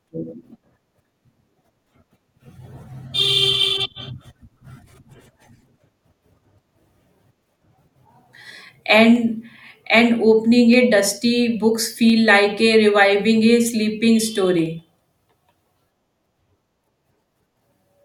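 Single sharp clicks occur in the speech at 9.16, 10.73, 12.10 (just after "dusty books"), 13.69 and 14.66 seconds. Each is likely dropped samples: a fraction of a millisecond missing from the stream, so the waveform jumps abruptly, leaving a thin vertical line across the spectrum.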